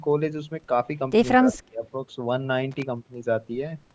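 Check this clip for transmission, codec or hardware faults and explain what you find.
Three faults are audible in this speech: a dip in level, a faint delayed echo within it, and a short burst of crackle. The call microphone processing, which leaves nothing above 8 kHz, is normal and not one of them.

From 1.38 to 1.84 s the speech is pulled down, most deeply by about 30 dB, across roughly 0.4 s in total. This is most likely speech suppressed in double talk. When both ends talk at once, the echo canceller cannot tell local speech from loudspeaker echo and attenuates both. Unlike a packet dropout, which is an abrupt silent hole, this is a gain ride that pumps the voice down and back up.

From 1.54 to 1.58 s a faint copy of the speech returns 231 ms late, about 30 dB below the direct sound. This is an echo leak, likely from a far end on a loudspeaker whose canceller let some of its microphone pickup through. 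Room reverberation decays smoothly straight from the original. This echo is instead a separate, distinct repeat at a fixed delay, and short.

From 2.71 to 2.83 s there is an irregular burst of scratching crackle. This is loose connector crackle: a worn or dirty contact making and breaking as it moves, chopping the signal, with pops added when there is DC on the line. Clipping tracks the loud peaks, and codec glitches come at regular frame intervals. This crackle is ragged and unrelated to what is being said.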